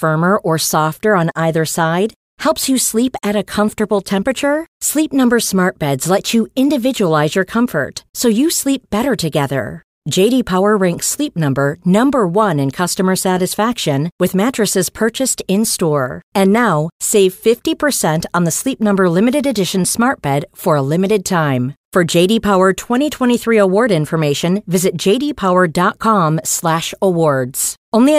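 No technical faults can be heard anywhere in the recording.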